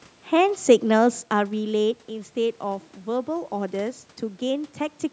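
Listening to this speech recording, nothing stood out as a technical problem.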